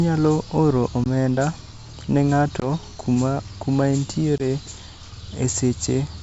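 Packet loss on an ADPCM call hits the speech three times: at 1.04 to 1.06 s, 2.60 to 2.67 s and 4.38 to 4.45 s. Each time about 20 ms of audio, a single packet, drops out to a hard-edged silence. The decoder's predictor and step size then no longer match the sender's. So the speech resumes with brief slight distortion. It recovers within tens of milliseconds. The G.722 wideband coding stays clear up to 7 kHz, consistent with its full 64 kbit/s mode.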